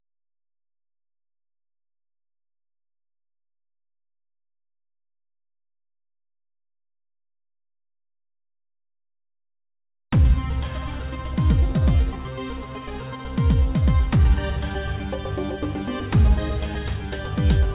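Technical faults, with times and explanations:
No faults found; the audio stops at 4 kHz, which fits a normal narrowband call path such as G.711 A-law at 64 kbps.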